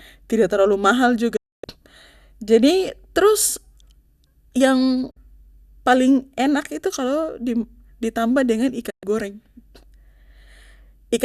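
A digital broadcast dropout occurs three times as the receiver loses valid frames and mutes until good ones return. The speech fades out over about 8 ms and goes silent from 1.36 to 1.64 s, from 5.11 to 5.17 s, and from 8.90 to 9.03 s. The gaps of roughly 0.26, 0.05 and 0.12 s fit whole frames of about 24 ms each. Whatever was broadcast during those holes is simply gone, not delayed.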